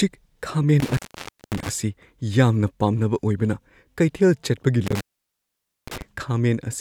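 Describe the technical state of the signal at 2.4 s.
At 2.4 s the speech signal is intact, with no audible technical fault at that moment.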